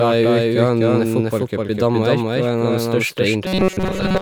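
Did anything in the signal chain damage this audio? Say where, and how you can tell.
Yes. A doubled audio track runs throughout: a dry, equal-level copy trails about 0.3 s behind, likely from a second capture path. Unlike room echo, it never decays.

From 3.44 s to the end there is robotic sound from repeated short buffers: a rigid 188 Hz buzz, likely from a starved driver buffer looping about 5.3 ms. Codec warble wouldn't hold one pitch.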